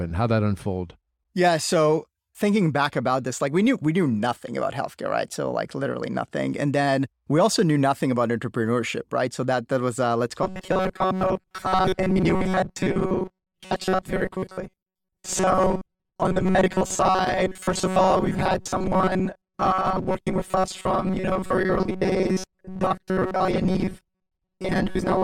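From 10.43 s, after "that was uh let's", to the end, robotic sound sets in: a rigid 188 Hz buzz, likely repeated ~5 ms buffers, with a fixed pitch that sets it apart from plain dropouts.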